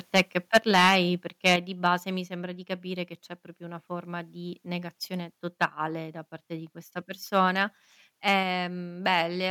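Harsh, crackling peaks flatten the loudest syllables at 0.15–0.21 s, 0.54–0.95 s, 1.46–1.55 s just before "di base mi sembra", 5.62–5.65 s between "una forma di negazione" and "da parte di questa", 8.28–8.33 s and 9.13–9.19 s. This is likely microphone overload, with peaks driven from about 9 dB down to about 0 dB past the converter's limit and their tops cut off.

Speech and background suddenly drop about 4 dB at 0.57 s, 6 dB at 1.56 s and 3 dB at 8.43 s, each right after distorted peaks. The likely cause is the microphone volume being stepped down by the call software.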